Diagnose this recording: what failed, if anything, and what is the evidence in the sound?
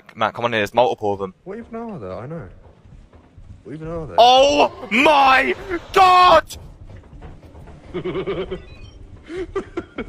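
A call bitrate drop at the codec stage: from 4.87 s to about 7.73 s the audio turns coarser, then clears. The bandwidth estimate fell, so the Opus encoder was pushed from 64 to 28 kbps and coded more roughly for roughly 2.8 s before recovering.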